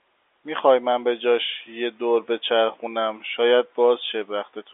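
The speech carries no audible technical faults.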